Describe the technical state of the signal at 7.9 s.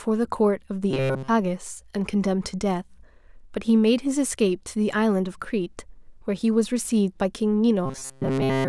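Robotic sound from repeated short buffers runs from 7.86 to 8.68 s: a rigid 133 Hz metallic buzz, likely from a buffer of about 7.5 ms being replayed in place of most of the speech.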